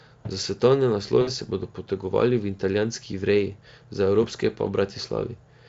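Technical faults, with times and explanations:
1.21 to 1.30 s, VoIP packet loss concealed by the speech codec: about 60 ms of audio goes missing, which fits three 20 ms packets, and the decoder covers the gap by extending the last pitch and spectral shape while lowering the gain. That produces a short buzzy or noisy, smeared stretch that fades before the speech returns on "se bodo potegovali," where it sounds briefly weak as the decoder recovers. Outside the gap, the Speex coding adds no more than faint damage.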